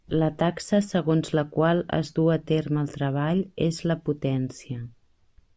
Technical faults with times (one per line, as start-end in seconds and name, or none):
none